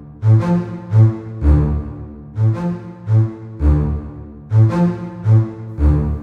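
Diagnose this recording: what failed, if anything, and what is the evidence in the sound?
Nothing in this music clip points to a failure anywhere in the chain, and it holds together without any dropout, glitch or distortion that would point to a stage going wrong.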